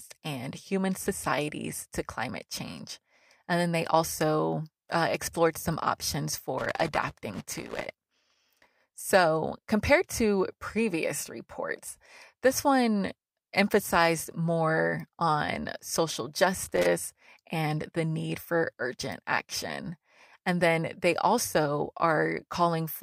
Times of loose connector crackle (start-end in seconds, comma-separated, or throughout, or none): 6.58-8.37, 16.64-16.86